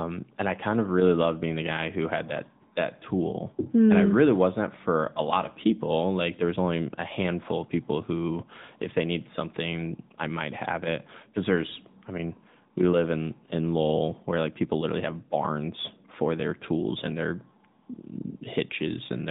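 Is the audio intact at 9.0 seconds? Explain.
No. At 9.0 s, as throughout the clip, the speech carries AMR narrowband mobile codec damage. A vocal-tract model driven by sparse pulses leaves the voice plainly buzzy and synthetic, consistent with roughly 10.2 kbps, and a spectrogram shows a hard ceiling at 4 kHz with nothing above.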